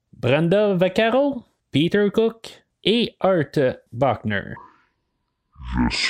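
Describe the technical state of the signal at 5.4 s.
At 5.4 s the speech is in a section at the wrong speed, from 4.57 s to the end, playing at 0.55x, likely from a wrong clock. Pitch drops roughly ten semitones and timing slows together, unlike a pitch shift.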